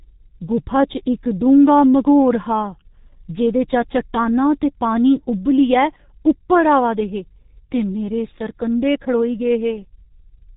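From start to finish the speech runs through a G.723.1 codec, and it's pretty heavy-handed here. Nothing gets through above about 3.8 kHz, so the top end is simply gone and everything sounds muffled. The coder works in coarse 30 ms frames and updates its model of the voice slowly, so consonants smear into each other and there's a rough, hoarse edge on the voice. That degree of damage fits the low-rate mode, around 6.3 kbit/s.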